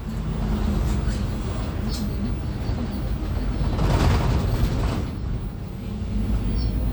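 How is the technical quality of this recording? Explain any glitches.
No glitches: the recording holds steady throughout, with nothing audibly going wrong at any point.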